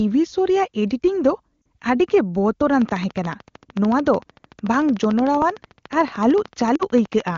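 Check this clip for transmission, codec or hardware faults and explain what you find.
Three faults stand out: two brief lost AMR speech frames events and a long train of clicks.

From 1.62 to 1.64 s and again from 6.75 to 6.83 s, lost AMR speech frames cause a short warble and a dip. Each gap lasts about 40 ms, which fits two lost 20 ms frames. The decoder repeats its last pitch and vocal tract settings with falling gain. These events are smooth dips rather than sharp pops.

From 2.82 to 7.37 s a train of clicks ticks regularly at 13.4 per second, roughly seventy clicks, peaking around 5 dB above the sound. It is likely caused by electrical interference. Unlike frame loss, the clicks are sharp, similar in shape, and continue through the pauses.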